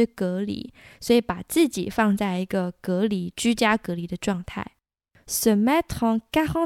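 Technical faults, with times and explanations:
No technical faults can be heard in this speech recording. There is nothing here to time or explain.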